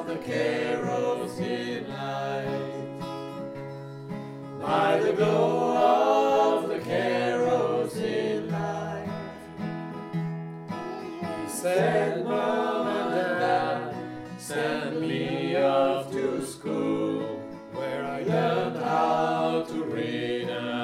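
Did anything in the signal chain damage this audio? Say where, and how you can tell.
No, nothing in the chain audibly damaged this signal at any stage, from capture through playback.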